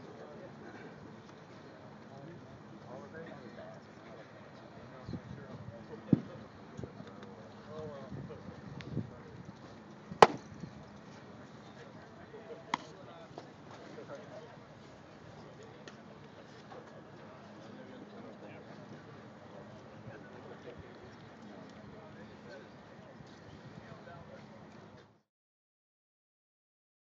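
Nothing stood out on listening, and the sound simply eases away in a smooth fade-out that begins at about 25 s and is complete by 25.32 s.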